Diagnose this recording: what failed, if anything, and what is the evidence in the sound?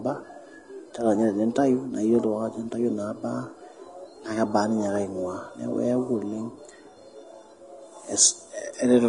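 The failure sits at the codec stage, and the damage is plainly audible across the whole speech clip. Nothing reaches above about 10.6 kHz, and the remaining treble sounds hissy and grainy, with consonant attacks smeared. The likely cause is Vorbis compression at a low setting, which fits a bitrate around 30 kbps. The encoder kept only a smooth spectral envelope up top and quantised the high-frequency residue so coarsely that detail became noise-like grain.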